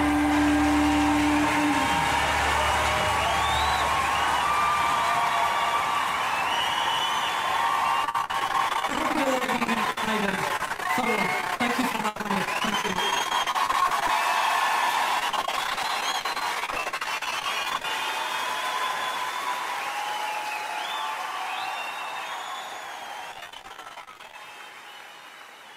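From 8.04 to 14.10 s, again from 15.20 to 17.85 s, and once more from 23.32 to 24.35 s, the sound turns choppy, with tiny slices dropping out. This is repeated packet loss (robotic sound): packets kept going missing or arriving late, and each hole was bridged by extending the preceding sound. Gaps reach 72 ms, 41 ms and 31 ms, and concealment fills about 29%, 29% and 46% of each stretch, so the final burst has the largest share patched over.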